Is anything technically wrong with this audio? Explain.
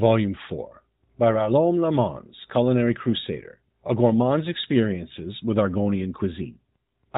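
No, nothing technically wrong stands out in this speech.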